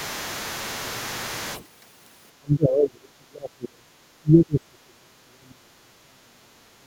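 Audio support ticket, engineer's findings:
Other side's voice leaking through, 0.0–1.64 s: faint second talker about 20 dB under near-end speech. Likely residual loudspeaker echo that the echo canceller failed to subtract.

Speech suppressed in double talk at 0.8–1.42 s (dip of about 10 dB), 2.39–3.88 s and 4.08–6.86 s (near-end speech pulled down by about 35 dB). Likely echo canceller attenuating both sides during overlapping speech.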